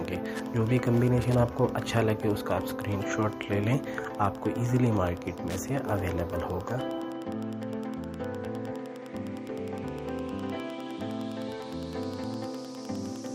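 A steady ticking runs under the audio from start to finish, about ten clicks a second and roughly 25 dB below the main signal. This is Wi-Fi interference: a nearby Wi-Fi radio's beacon, repeating every 102.4 ms, is picked up and rectified by the audio circuit.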